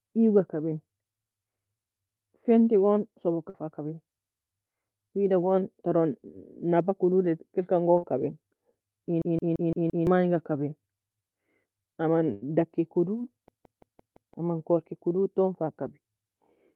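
Speech over a call line with three kinds of trouble. There's short concealed packet loss at 3.49 to 3.56 s and again at 7.98 to 8.04 s, just after "ta elkan": about 40 ms went missing each time and was patched over, leaving a quick smear. Twice, at 9.22 to 10.07 s and at 13.48 to 14.34 s (between "daki kodo" and "amn corki kdod ta"), there's a system hang loop: one 170.67 ms chunk repeats five times at 5.86 Hz, a stutter that fits an 8192-sample buffer cycling while the machine froze, with around a second of audio lost each time. At 12.34 to 12.44 s, right before "daki kodo", a burst of packet loss takes out 80 ms, which gets filled by a held, fading continuation before the audio jumps ahead.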